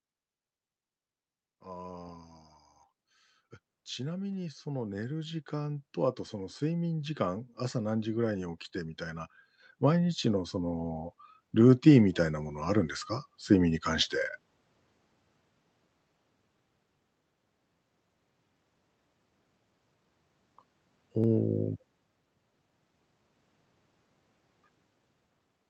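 From 3.96 to 8.67 s the speech and the background swell together by about 10 dB, then again from 9.78 to 14.16 s by about 7 dB. This is automatic gain rising: the gain control judged the input too quiet and slowly raised its gain.

From 21.24 to 25.24 s, about five small ticks fall exactly 1.0 s apart, audible only while there is signal. These are periodic USB or driver dropouts: a recurring background task stalled the audio path, and each time well under a millisecond of audio was skipped.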